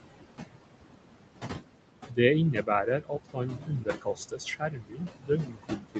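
Noise suppressor artifacts run through the whole clip. The suppressor pulls down, frame by frame, the bands it judges to be steady noise, here by about 20 dB. With room noise only about 6 dB below the speech, the noise sinks between the words and rises under them.

Speech cut by the noise suppressor follows, at 2.09–2.18 s and 2.53–2.69 s, each roughly a tenth of a second of speech turned down, by about 13 dB and about 15 dB. From 2.86 s to the end the suppressor keeps mistaking speech for noise, with drops of up to about 22 dB, so sounds come out swallowed and faint.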